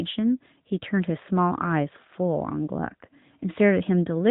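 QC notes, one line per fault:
Throughout: AMR narrowband mobile codec. Everything above 4 kHz is gone, so the speech sounds boxed-in and phone-like. The pulse-driven vocal-tract model adds a plainly audible buzzy, synthetic edge, which fits one of AMR-NB's higher-rate modes around 10 kbps.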